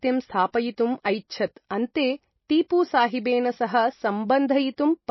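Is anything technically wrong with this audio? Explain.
Yes. Throughout, the speech has plainly audible damage, likely from MP3 compression at a low bitrate around 24 kbps. Nothing sits above 5.8 kHz, a flat spectrogram ceiling, and flickering weak components make it watery.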